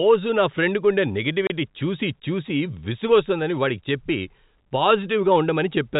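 At 1.47 s the speech drops out abruptly for 30 ms, right after "నా ఫ్రెండ్కుండే" and before "చూసి చూసి విసుగొస్తోందని వాడికి", leaving a hard-edged hole where the sound stops and restarts. This is packet loss filled with silence: the gap fits a single lost 30 ms packet, and the receiver played nothing in its place. The audio carries the 4 kHz ceiling of G.711 telephone coding.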